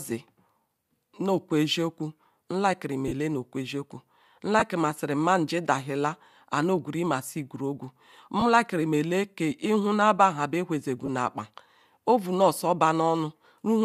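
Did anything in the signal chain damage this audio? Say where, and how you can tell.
Yes. Lost LE Audio frames on the Bluetooth link cause brief grainy smears at 3.08 to 3.12 s, at 4.59 to 4.63 s just before "si mani dazila", at 8.40 to 8.43 s and at 11.06 to 11.09 s. Each spans whole 7.5 ms frames, likely from LC3, whose decoder refills them with the last spectrum under random signs, so the gaps hiss instead of dropping to silence.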